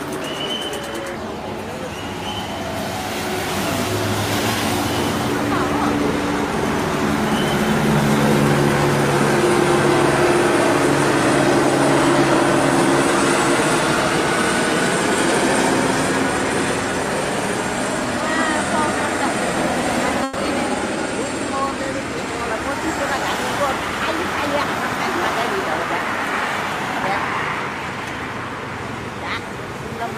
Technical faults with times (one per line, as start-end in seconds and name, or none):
20.23-20.37 burst of packet loss